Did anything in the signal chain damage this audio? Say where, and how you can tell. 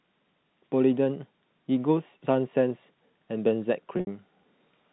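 Yes, at the network stage: packet loss with pitch repetition between 3.97 and 4.07 s, with about 90 ms lost over 100 ms and a longest gap of 70 ms. The receiver loops the last pitch period, so a buzzy held tone fades toward silence before a cross-fade restores the speech. A plain dropout would cut to silence instead. The G.711 telephone band around it is intact.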